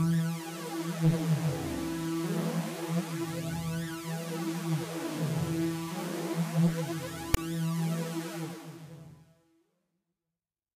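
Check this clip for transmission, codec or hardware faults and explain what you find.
One fault, a transmission or file-handling error rather than a codec or hardware fault. At 7.34 to 7.37 s, file tags played as audio: tag text read as samples gives a hard-edged, one-sided rasp, then padding drops to silence, unlike a plain dropout.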